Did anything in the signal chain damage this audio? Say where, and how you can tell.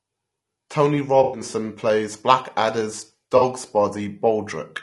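Yes. Low-delay AAC compression, throughout, at the codec stage: the speech is rough and grainy, with noise between harmonics, most likely from AAC-ELD's short frames at a bitrate around 32 kbps.

AAC frame loss with concealment, at 1.23–1.41 s and 3.37–3.42 s, at the network stage: smeared, noisy patches where the decoder patched missing frames from the previous spectrum.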